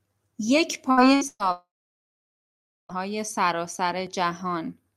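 At 0.91 to 1.00 s, 1.15 to 1.24 s and 1.27 to 1.43 s the speech briefly freezes into a held buzz or fading hiss, the third lasting longer and trailing into a short silence. Each is a burst of packet loss: about 60, 60 and 120 ms of speech never arrived, and the receiver stretched the last sound to fill the gap.

From 1.52 to 2.92 s the speech smears into a brief fading tail, then drops to silence for about 1.2 s before returning with roughly 1.4 s of speech gone. This is likely a long network dropout, where no audio arrived.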